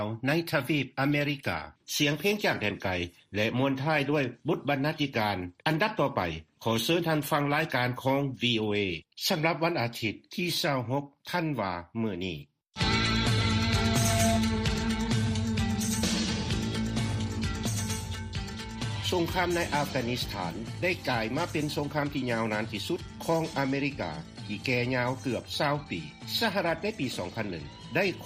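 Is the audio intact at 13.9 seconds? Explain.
No. From 13.53 to 14.44 s a loudspeaker feedback squeal takes over. The microphone is picking up its own loudspeaker, and at 679 Hz the loop gain exceeds one, so that frequency feeds on itself, swelling in well under a second to a piercing tone about 5 dB above the surrounding sound. A spectrogram shows a single bright horizontal line at 679 Hz intensifying, and the waveform envelope balloons then drops at 14.44 s.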